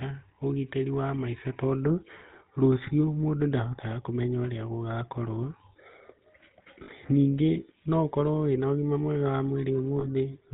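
Across the whole speech clip runs the buzzy, gravelly roughness of the GSM full-rate codec, with nothing above 4 kHz. The voice is rebuilt from a vocal-tract model driven by coarsely spaced pulses, which fits 13 kbps. That grit sets it apart from plain band-limiting, which would only dull the sound.

Lost GSM frames appear at 6.84 s, just before "ningĩ no", lasting about 40 ms (which fits two frames), and again at 10.0 s for about 20 ms. The decoder repeats the last good frame, so the sound rings metallically rather than dropping to silence.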